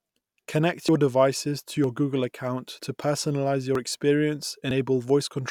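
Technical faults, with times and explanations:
0.89, 1.84, 3.75 and 4.71 s, audio missing between chunks: the speech skips forward abruptly, dropping roughly 40 ms each time with no silence at the join. The roughly one-second spacing points to a likely loss while one processing chunk closes and the next opens.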